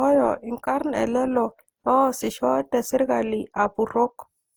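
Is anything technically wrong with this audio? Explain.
Yes. Throughout, the speech sounds swirly, smeared and hollow, with blurred attacks. The likely cause is generation loss: about five lossy re-encodes, fitting Opus at 48 kbit/s, each stacking fresh quantisation damage.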